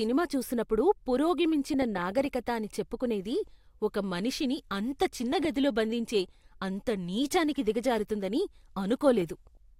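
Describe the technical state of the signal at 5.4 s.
At 5.4 s the speech carries DAB burbling, running from 5.32 to 5.45 s, between "ఒక మనిషిని అంత చిన్న" and "గదిలో బంధించే అంత నీచానికి". A small residual bit error rate is slipping past error correction into the MP2 data, corrupting samples into short noise blips in single sub-bands and, where wrong scale factors get through, making individual sub-bands leap in level for up to a frame, which fits about eleven damaged frames. It sounds like brief blips of noise. On a spectrogram, isolated rectangular patches flare in single frequency bands. The waveform shows brief, irregular bursts.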